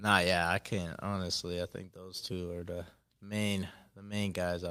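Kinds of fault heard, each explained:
Clock drift between sender and receiver: The speech carries faint, unevenly spaced hiccups throughout. The sender's clock runs roughly 2% slower than the receiver's, so the jitter buffer keeps draining and the receiver has to pad the stream with short repeated slices to avoid running dry.
Repeated timing corrections: From about 0.4 s to 4.49 s the tempo drags slightly and unsteadily, playing at about 98% speed. The receiver repeatedly inserts small repeated fragments, all lengthening the audio, at irregular intervals, adding roughly a tenth of a second overall.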